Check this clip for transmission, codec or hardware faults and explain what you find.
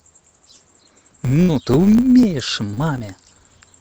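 Two faults turn up in this speech clip, one running the whole way through and one repeating from a quarter second on.

Throughout, there's a filter restarted on every block. Something in the chain clears its filter state at each block boundary, so every block kicks off with a small transient. That comes out as a 100 Hz buzz riding the speech level, which fits blocks about 10 ms long.

From 0.25 s to the end there are periodic USB or driver dropouts, roughly every 0.25 s. Each time, a background task stalls the bus or driver and a sliver of audio is skipped outright. You hear evenly spaced ticks that show up only while there's signal.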